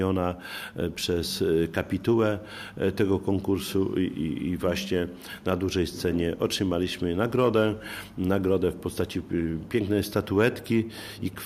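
Nothing in this audio stands out as a technical fault, so there's nothing here to flag or trace back to a cause.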